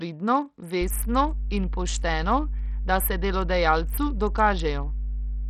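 From the start, the speech carries heavy damage that is likely Bluetooth SBC compression at a starved bit pool, which fits a rate near 64 kbps. Coarse sub-band quantisation leaves the treble flickering and gritty, with aliasing noise; a spectrogram shows blotchy, blocky upper bands and nothing above 17.1 kHz.

At 0.81 s mains hum enters and runs to the end: a steady 50 Hz tone with low harmonics, roughly as loud as the speech itself. A spectrogram shows a solid line at 50 Hz with fainter multiples, and the waveform gains a constant low-frequency ripple.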